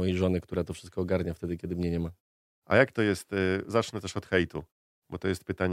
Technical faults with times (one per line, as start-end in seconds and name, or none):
none